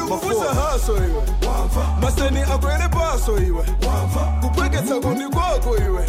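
Nothing technically wrong can be heard in this audio. No dropouts, glitches or other disturbances interrupt it at any point.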